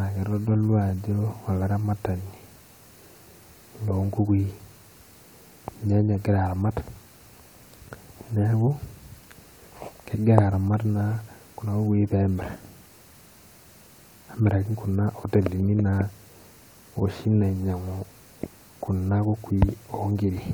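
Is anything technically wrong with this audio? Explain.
No, nothing technical stands out here; it's just speech, with nothing to flag.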